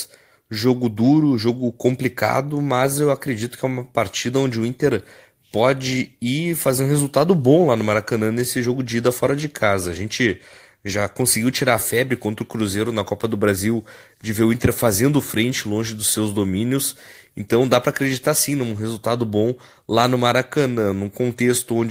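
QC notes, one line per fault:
No faults found on this speech clip; the signal path holds steady with nothing to log.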